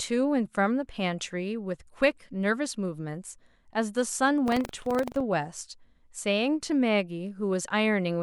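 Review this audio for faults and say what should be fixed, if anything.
From 4.44 s to 5.25 s the speech carries a rattling buzz at about 23.4 Hz, which fits a 2048-sample buffer. This is buffer tearing: the writer and the hardware reader of the ring buffer have drifted, so a small slice of each period, a few percent, replays audio from about a tenth of a second earlier, with hard joins either side. Unlike an underrun, there are no silent gaps, and the buzz follows the signal. Keep write and read pointers synchronised, resetting them after any stall.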